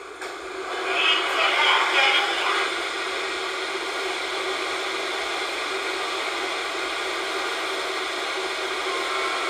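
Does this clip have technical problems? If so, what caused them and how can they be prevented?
No, no technical problems can be heard in this recording of sounds. With nothing wrong in the audio, there is no cause to trace and nothing that needs preventing.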